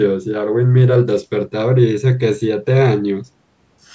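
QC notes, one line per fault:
No faults are heard in this speech clip. The call microphone processing can be heard as a top end that stops at 8 kHz, with the lowest bass trimmed as such processing normally does.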